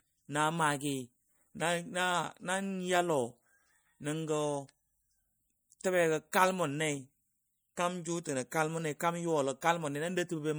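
Throughout the recording the speech carries a watery, swirling quality, and sibilants have a metallic chirp. This is most likely MP3 compression, with damage plainly audible and a level of degradation that fits a low rate around 64 kbps. The encoder starves weaker frequency lines of bits, so they flicker in and out between frames. On a spectrogram that appears as scattered, blinking holes in the mid and upper bands, with everything above 21.1 kHz cut away cleanly.

Pre-echo appears at 6.32 s, 8.99 s and 9.61 s. Each time, a sharp onset sits late in a transform block, and the quantisation noise meant to hide under the loud attack spreads into the quiet just before it. The result is a brief hiss that runs ahead of the attack by about 16 ms, 11 ms and 13 ms respectively, and the onset itself sounds softened. A waveform shows a noisy smear leading each transient, and a spectrogram shows a thin broadband haze in front of the attack.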